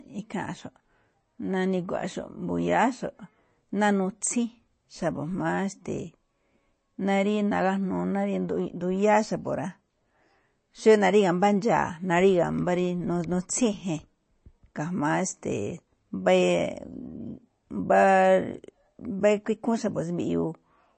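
Throughout the speech, nothing sounds above about 8.3 kHz, and a watery, swirly texture is plainly audible. This likely comes from low-bitrate MP3 compression, which fits about 32 kbps.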